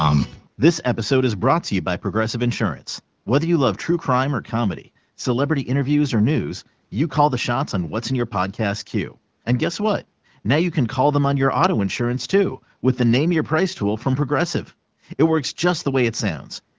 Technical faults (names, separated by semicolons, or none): none